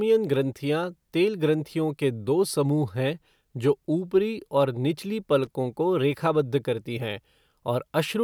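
At 5.44 to 5.47 s, just before "को रेखाबद्ध करती हैं", a short burst of loose connector crackle cuts into the speech. It lasts about 34 ms. A worn or dirty contact in the signal path briefly lost and regained its connection as it shifted. That rapid making and breaking chopped the audio into fragments. Any DC on the line added pops at each break. The result is a brief, irregular scratchy crackle.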